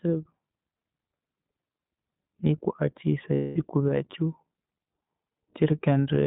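This is a speech clip carried over the iLBC codec throughout. The sound is confined to a narrowband line of about 150 Hz to 3.7 kHz, so nothing above 4 kHz survives. Codec damage is plainly audible. The voice has a rough, slightly synthetic edge, because each short frame's excitation is coded on its own rather than built from the frame before. The 20 ms framing fits iLBC's 15.2 kbps mode. From 3.34 to 3.58 s there are lost iLBC frames. For those 220 ms the decoder fills the gap by repeating the last pitch cycle, mixed with noise and fading. This is heard as a held, buzzy, breathy vowel. The gap fits eleven missing 20 ms frames. Because iLBC frames stand alone, the voice recovers almost immediately after 3.58 s.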